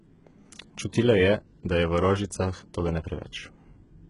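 HE-AAC compression runs through the whole clip. The treble is likely rebuilt by spectral band replication, copied upward from lower bands rather than coded, so s sounds turn gritty and metallic. Nothing sounds above 11.1 kHz, and the heavy damage fits a bitrate near 12 kbps.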